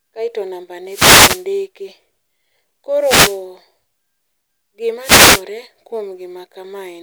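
Speech carrying three wireless microphone noise hits, at 0.86–1.47 s, 2.96–3.44 s and 5.01–5.44 s, each a brief swish of static as the FM radio link fades and receiver noise rises over the voice. A spectrogram shows broadband vertical noise bands; the waveform thickens into hiss-filled bursts.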